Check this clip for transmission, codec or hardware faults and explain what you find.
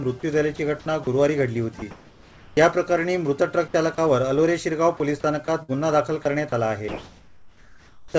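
Voice-detector faults appear throughout, over a call path that passes nothing above 8 kHz.

Sound dropped by the voice detector occurs at 0.56–0.59, 1.04–1.07, 3.95–3.98 and 6.49–6.52 s. Each time, about 30 ms gives way to steady noise, with 20–30 ms of sound lost. The likely cause is the detector briefly judging the sound as background.

Sound chopped by the voice detector appears from 1.79 to 2.57 s and from 5.45 to 5.71 s. Sending likely switched on and off repeatedly, so the sound turns choppy.

Comfort noise in place of the background runs from 6.88 to 8.14 s. The pause was likely left unsent, and a smooth synthetic hiss replaces the real background. That background sits about 32 dB below the loud parts, and the level shifts by about 3 dB.

An onset clipped by the voice detector comes at 8.10 s. The detector likely reacted late, so the first 40 ms are missing and the sound starts abruptly.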